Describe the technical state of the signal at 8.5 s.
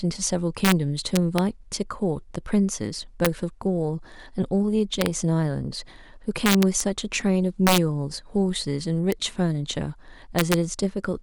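At 8.5 s the speech signal is intact, with no fault present at that moment.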